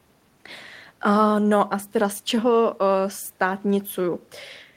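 No technical faults can be heard anywhere in the speech, with the signal staying steady and intact throughout.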